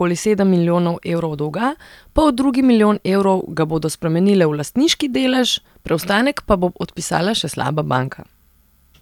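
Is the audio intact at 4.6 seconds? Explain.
Yes, the speech at 4.6 seconds is intact, with no audible fault at that moment.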